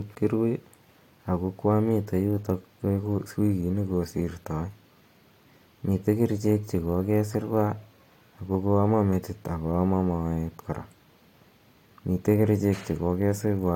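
Nothing in the speech stands out as a technical fault at any point, so there's nothing here to flag.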